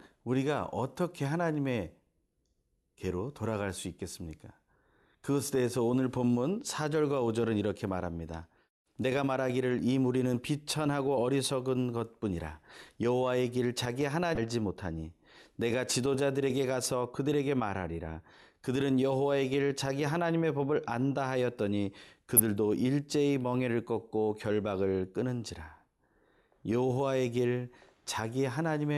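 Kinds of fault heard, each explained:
Damaged data in a compressed stream: Corrupted bytes in the encoded speech make the decoder misread frames, lose sync and hunt for the next valid frame header, producing two brief glitches, at 14.34–14.38 s and 22.37–22.40 s, each about 30 ms long. On a spectrogram each appears as a narrow vertical disruption cutting across the speech harmonics. In the waveform there is an abrupt discontinuity where the signal shape breaks and then resumes.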